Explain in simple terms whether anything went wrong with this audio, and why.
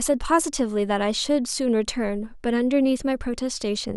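Nothing went wrong with this audio, because no fault can be heard anywhere in it.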